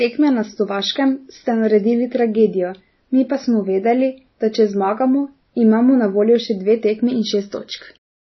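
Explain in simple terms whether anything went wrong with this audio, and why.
Throughout the speech, nothing is heard above 5.9 kHz, so s sounds lose their crispness and the fainter detail has a watery, swirling quality. The likely cause is heavy MP3 compression. Short of data, the encoder dropped the treble and discarded faint frequency detail.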